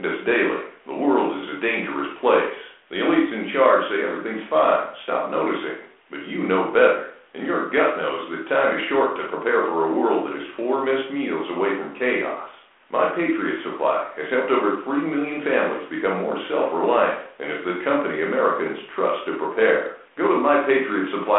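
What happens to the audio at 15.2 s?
At 15.2 s the speech continues intact, with no dropout, click, distortion or other fault at that moment.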